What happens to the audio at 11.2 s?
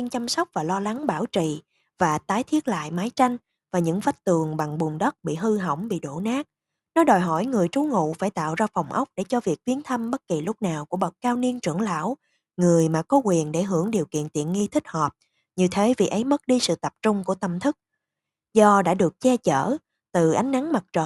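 At 11.2 s the speech carries a 25 Hz buzz from the resampler restarting on every block (0.0 to 14.72 s). Each 40 ms block was converted from 24 kHz to 48 kHz without its neighbours, leaving an edge error. Unlike mains hum, the buzz vanishes in pauses.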